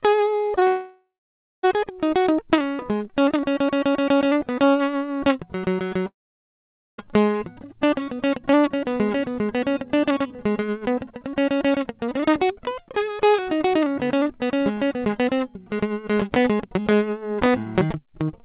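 Music coming over a call line, band-limited to nothing above 4 kHz, which fits a G.711 mu-law path at 64 kbps. Right at the start there's a cluster of short concealed packet loss: about 40 ms around 0.46 to 0.52 s, then 20 ms chunks at 0.56 to 0.59 s and 0.59 to 0.63 s, each patched by the receiver stretching the last bit of sound, so you hear a quick smear or wobble. Then come two gaps that sound like a long network dropout, likely the cause. From 0.67 to 1.65 s the music carries on as a fading buzz and then goes quiet for about half a second. From 6.07 to 7.06 s it's almost entirely silent, close to 0.9 s. Both times the music picks up further on with that stretch simply gone.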